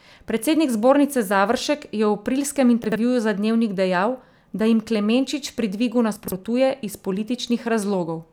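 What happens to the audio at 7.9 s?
Nothing goes wrong at 7.9 s; the speech runs through that moment intact, with no dropout, click or distortion.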